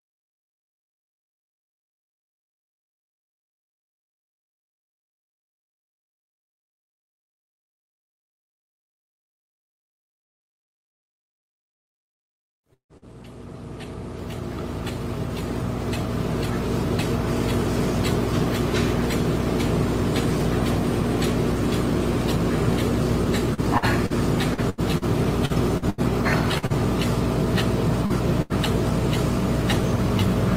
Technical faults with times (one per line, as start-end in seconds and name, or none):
10.23-13.05 repeated packet loss (robotic sound)
23.54-26.73 repeated packet loss (robotic sound)
28.06-28.13 short concealed packet loss
28.42-28.53 burst of packet loss